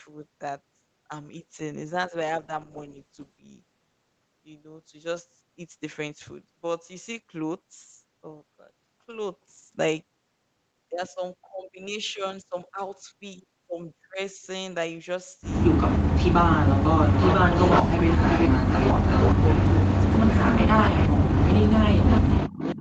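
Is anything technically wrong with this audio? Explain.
Yes, three kinds of fault affect this speech. From 2.4 to 3.53 s, a call bitrate drop cuts Opus from 32 to 13 kbps, so the coarser coding makes the voice rough and watery until the rate recovers. An echo leak, likely from a loudspeaker's echo canceller letting sound through, returns a copy delayed by 371 ms: a brief scrap at 15.87 to 15.98 s about 10 dB down, then from 17.08 s to the end at only about 5 dB below. Speech suppressed in double talk, likely because the canceller ducked both sides at once, makes the voice dip or break up at 16.47 to 17.44 s (roughly 30 dB deep), 17.83 to 18.09 s, 18.64 to 19.02 s and 22.02 to 22.8 s.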